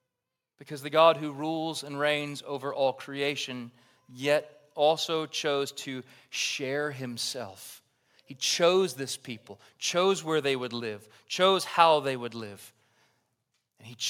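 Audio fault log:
No faults can be heard anywhere in the speech recording, and the signal holds steady and intact from its first moment to its last.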